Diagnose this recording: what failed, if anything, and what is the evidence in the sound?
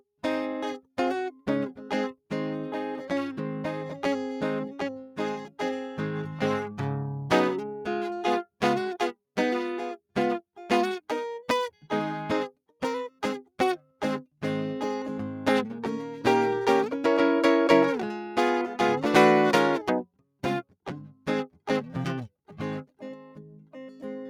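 A noise suppressor applied to music runs through the whole recording, a fault in the call-processing stage. Its gain moves by roughly 5 dB as the music shifts. The suppressor is designed for speech and treats sustained tones, ambience and reverb as noise. Attacks mostly get through, while held notes and decays are pushed down, so the music pumps and thins instead of keeping a stable level.

Sound cut by the noise suppressor appears as five brief dips, at 5.03–5.19 s, 5.42–5.59 s, 13.80–14.01 s, 21.07–21.27 s and 23.59–23.75 s. Each lasts a fraction of a second. The level falls by about 12 dB in four of them and about 10 dB at 13.80 s. In each dip the suppressor misread the music as noise and cut it far harder than the surrounding material.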